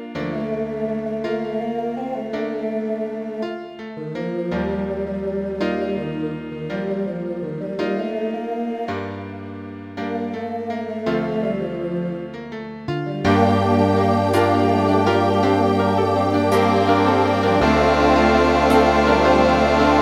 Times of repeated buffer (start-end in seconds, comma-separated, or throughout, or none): none